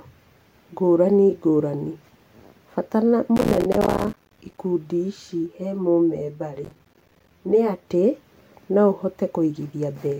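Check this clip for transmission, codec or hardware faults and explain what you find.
Yes, there are two kinds of fault: processor overload crackle in two bursts, and comb filtering from a channel delay.

Processor overload crackle, 3.37–4.58 s and 6.65–7.31 s: the processor repeatedly missed deadlines for short buffers of around 5 ms, each leaving a brief silent gap. Dozens of these in a row give gritty, tearing crackle over the speech. On the waveform, the signal is cut by many hard-edged dropouts. On the spectrogram, those edges appear as thin vertical broadband lines.

Channel delay (comb filtering), 5.46–7.88 s: one channel lags the other by roughly 10 ms, and summing the two to mono cancels shared content at evenly spaced frequencies, starting near 40 Hz. The speech turns hollow and phasey. On a spectrogram, this shows as fixed horizontal notch bands stacked up the spectrum.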